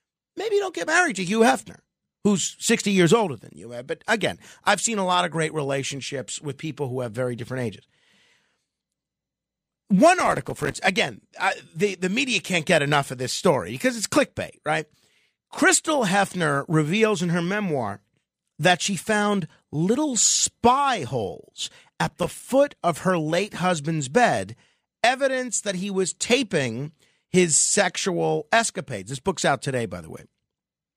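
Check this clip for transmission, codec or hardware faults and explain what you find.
Two bursts of processor overload crackle occur in this speech, from 10.2 to 10.75 s and from 22.05 to 22.45 s. In each, the processor repeatedly misses deadlines for tiny buffers of a few milliseconds, and each missed buffer becomes a short silent gap with hard edges. Dozens of these gaps land in quick succession, producing a gritty tearing over the speech that stops once the load eases. Network packet loss sounds different: it leaves fewer, longer dropouts rather than this dense, fine-grained crackle.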